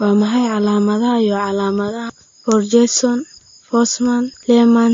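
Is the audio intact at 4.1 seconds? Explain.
No, at 4.1 seconds the speech carries the same damage it has from start to finish: nothing above about 7.2 kHz, and the artefacts of two different codecs heard together. That mix points to transcoding between lossy codecs, likely a low-bitrate Vorbis pass around 45 kbit/s followed by MP3 near 49 kbit/s. The MP3 stage wasted bits re-encoding the Vorbis artefacts, added its own, and kept the low top end.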